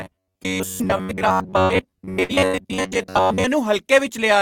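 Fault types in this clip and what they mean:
Robotic sound from repeated short buffers, 0.01 to 3.44 s: the speech turns into a rigid, metallic buzz fixed near 94 Hz, likely because audio arrived too seldom and the last 11 ms or so was replayed repeatedly while much of the real signal was skipped.
Burst of packet loss, at 1.03 to 1.12, 1.63 to 1.72, 2.23 to 2.32 and 2.47 to 2.56 s: each time about 60 ms of speech is lost. The receiver carries the last sound on, fading, for 53 to 64 ms, then resumes further along.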